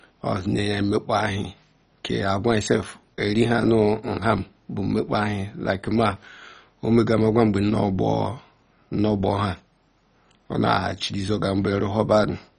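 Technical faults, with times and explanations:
Throughout, MP2 compression: the speech sounds heavily dulled and gurgling, with granular grit and nothing above 10.4 kHz. This is likely MPEG Layer II coding starved of bits, as at about 32 kbps, so upper sub-bands flicker off and the rest are coarsely quantised.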